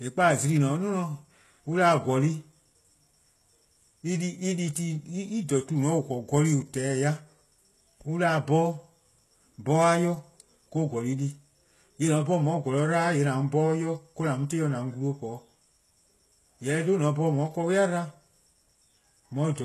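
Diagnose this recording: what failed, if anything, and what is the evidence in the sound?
Codec stage: across the whole speech, the top stops dead near 12.3 kHz and s sounds come out gritty and metallic, likely HE-AAC rebuilding treble from copied lower bands, consistent with roughly 16 kbps.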